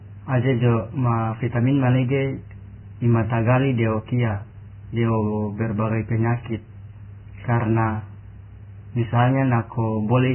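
Vorbis compression, running throughout the clip, heavy enough to mark the whole recording. Nothing survives above 3 kHz, so the speech sounds dull and boxed in, and what treble remains near that limit has turned into a grainy, hissy wash. Tones are roughened and attacks smeared. This is likely a Vorbis encode at a very low bitrate, around 10 kbps, where the coder lowers its cut-off and quantises the residue so coarsely that fine detail is replaced by noise.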